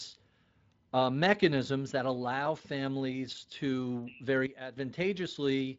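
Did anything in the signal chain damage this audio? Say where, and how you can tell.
Yes. Just after "that allow families to", a sudden gain jump drops the level about 12 dB from 4.46 to 4.77 s. Speech and background noise fall together with no ramp, which points to a likely unramped digital gain change in processing.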